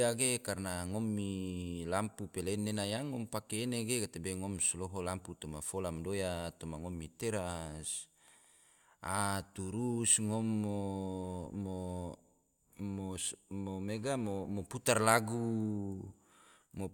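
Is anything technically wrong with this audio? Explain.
No, nothing technically wrong stood out on listening to this speech recording.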